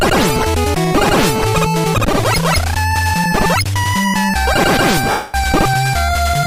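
From 5.11 to 5.35 s, a run of Bluetooth LE Audio frames never reached the decoder, a dropout of 230 ms that fits about two dozen consecutive 10 ms frames. The LC3 decoder covered the gap by repeating the last good spectrum with randomised signs, then fading it as the loss dragged on. Any tonal content turns into a hissy, noisy smear that sinks gradually toward silence before normal sound resumes. Light lossy compression is also present.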